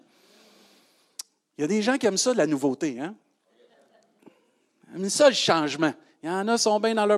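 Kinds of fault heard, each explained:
Nothing in the speech stood out as a technical fault on listening.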